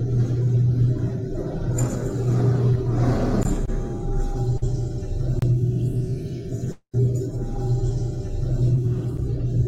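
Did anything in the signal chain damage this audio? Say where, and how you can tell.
Yes. The output buffer was likely not filled in time on three occasions, so the driver or buffer stage delivered a block of digital silence instead of audio. The sound drops straight to silence and returns with no fade. The holes are at 3.43 to 3.45 s (20 ms), 5.39 to 5.42 s (30 ms) and 9.17 s (10 ms). The shortest is heard as a tick.

Short concealed packet loss appears three times at the network stage. Each time, a few hundredths of a second of audio failed to reach the decoder, and the receiver filled the hole by extending the preceding sound before blending back into the real signal. This happens at 3.65 to 3.69 s (20 ms missing), 4.57 to 4.64 s (about 40 ms missing, covered by 43 ms of synthesized fill) and 8.75 to 8.80 s (20 ms missing). Each is a brief smear or wobble rather than a clean cut. The last one also shifts the timing, adding a few milliseconds.

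There is a long network dropout from 6.72 to 6.95 s, which was likely caused by a stall on the network path. About 220 ms of audio is missing. The receiver covered roughly 216 ms of it by continuing the last sound as a fading buzz or hiss, and about 80 ms of that stretch falls to silence. The sound then resumes further on, and the missing portion is gone.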